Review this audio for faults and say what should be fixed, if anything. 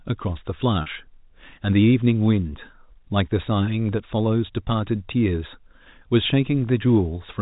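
Packet loss with pitch repetition at 0.82 to 0.86 s: about 40 ms was lost, fitting four 10 ms packets. The repeated last pitch period sounds briefly held and buzzy, and it shows as frozen, flat harmonics on a spectrogram and identical repeating cycles in the waveform. Forward error correction or redundant packet transmission on the network path would prevent this gap.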